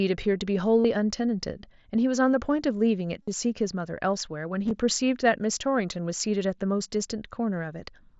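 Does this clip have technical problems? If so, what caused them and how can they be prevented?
Yes. There are three bursts of concealed Bluetooth headset packet loss. They occur at 0.81 s, 3.23 s and 4.65 s. Headset packets dropped on the wireless link. The phone filled each gap by repeating a short recent stretch of the waveform. The first two gaps lose about 45 ms and 52 ms in solid runs. They sound like a brief buzzy, held tone with a slight warble as real audio resumes. The third is scattered over 60 ms, with runs no longer than 15 ms, so it is subtler. The mSBC wideband link carrying the audio passes speech up to 8 kHz, with only light coding damage. To prevent this, keep the headset close to the phone with a clear line of sight and away from busy 2.4 GHz interference.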